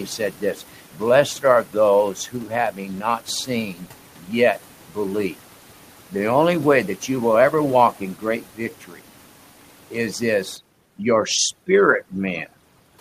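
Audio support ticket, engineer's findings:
Speech cut by the noise suppressor, five spots: 0.06–1.02 s, 1.39–1.76 s, 2.14–4.97 s, 5.33–6.14 s (right before "only way"), 7.92–10.21 s (right after "you will ever"). Quiet syllables and tails get ducked as much as about 12 dB, roughly 700, 150, 1500, 700 and 1500 ms affected respectively. Suppressor's gate is misjudging low-level speech as noise against the room noise and pulling it down along with the background.

Overdone noise removal, 10.57 s to the end. Noise reduction stage is clamping bands that sit near its noise estimate, so the room noise drops and breaks up into twinkly specks, and the voice's quieter frequency content gets stripped too. Reduction depth is set too aggressive. Back it off or raise the threshold.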